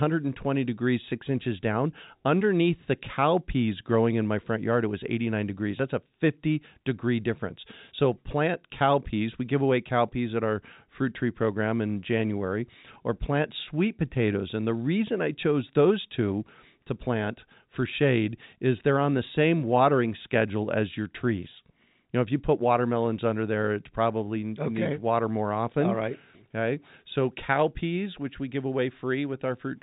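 Nothing goes wrong anywhere in this speech, which simply carries the narrow, phone-line character of G.711 telephone coding, with nothing above about 3.8 kHz getting through.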